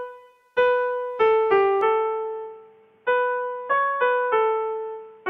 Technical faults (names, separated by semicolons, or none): input switched to a poorer device